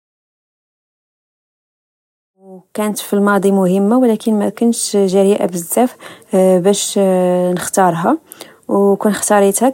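The speech signal has no technical faults, and the only level change is a smooth fade-in, without any click or hard edge, that begins at roughly 2.5 s and reaches full level by 3.23 s.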